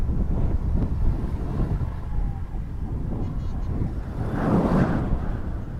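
Nothing stood out on listening to the clip.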